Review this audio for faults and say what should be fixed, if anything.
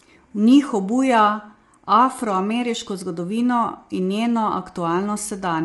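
Low-delay AAC compression, throughout: the speech is plainly rough and grainy with nothing above 11.6 kHz, likely AAC-ELD's short frames starved at about 32 kbps.

To prevent this, give the low-delay stream a higher bitrate, or use a longer-frame codec where latency allows.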